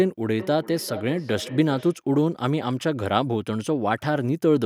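From 0.39 to 2.01 s, the speech returns as a feedback echo between two devices. A second device on the call replays it, and the first microphone picks it up again. Repeats arrive roughly every 400 ms, peaking about 14 dB below the speech.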